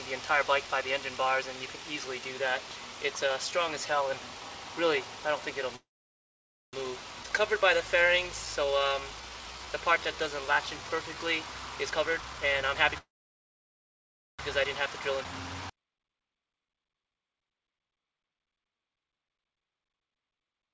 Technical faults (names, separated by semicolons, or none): call audio freeze; skip ahead; jitter buffer slow-down; jitter buffer speed-up